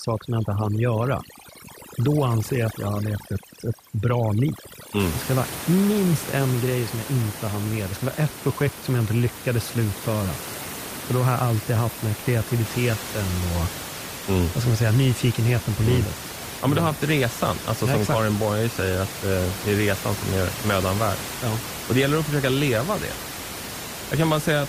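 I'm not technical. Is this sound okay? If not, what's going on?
No. From 0 to 5.0 s the background drops and breaks up into twinkling specks. That's overdone noise removal: a cleanup tool set too strong, cutting away parts of the voice along with the room noise.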